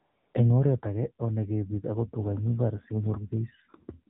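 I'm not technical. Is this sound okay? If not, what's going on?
No. The whole clip has the muffled, buzzy, synthetic tone of an old mobile phone call. That is the AMR narrowband mobile codec, a phone-call compression system that rebuilds the voice from a rough model and cuts away everything above 4 kHz, so crispness is lost.

At the very start, from 0 to about 0.34 seconds, there is a smooth, even hiss instead of the real background. That is AMR comfort noise: the phone decided nobody was talking and filled the gap with artificial noise.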